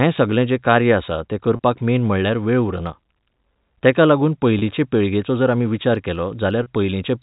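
At 1.56 s, 4.59 s and 6.63 s, the speech briefly holds and buzzes. Each is packet loss with pitch repetition. About 30 ms went missing each time, which points to one lost packet. The receiver looped the last pitch period to bridge it. The middle gap falls between "तेका लागून" and "पिळगेचो जर आमी विचार". Throughout, the G.711 telephone band tops out at 4 kHz.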